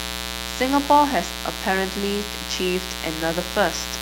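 A mains buzz runs through the whole speech clip. Switching spikes from a 60 Hz supply add harmonics, giving a steady, raspy buzz. It sits fairly loud against the voice.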